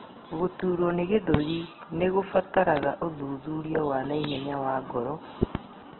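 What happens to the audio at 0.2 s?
At 0.2 s the speech is squeezed through what is likely Opus compression, running throughout the clip at a very low rate, consistent with about 8 kbps in its music-oriented CELT mode. Short of bits, the encoder keeps each band's energy but refills detail with folded or noise content and narrows the bandwidth, so nothing remains above 4.1 kHz. The voice sounds muffled, rough and grainy, with heavy damage.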